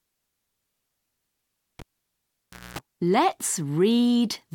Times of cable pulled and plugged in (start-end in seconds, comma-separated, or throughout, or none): 1.79-2.79